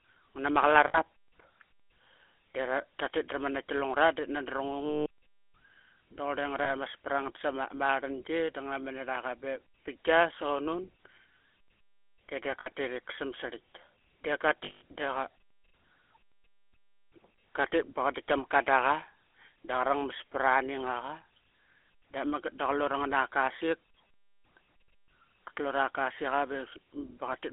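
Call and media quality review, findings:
GSM full-rate codec, whole clip: buzzy, gravelly roughness on the speech, band held to about 300 Hz to 3.4 kHz. The sound fits 13 kbps GSM full rate. The pulse-driven excitation causes the grit. Plain narrowband filtering would sound clean, only dull.

Lost GSM frames at 0.88–0.98 s, 4.86–5.07 s, 6.64–6.70 s, 12.60–12.69 s and 14.64–14.82 s: rough metallic ring held over each gap, including the 200 ms and 180 ms losses. Decoder concealment repeats the last good frame. A plain dropout would cut to silence instead.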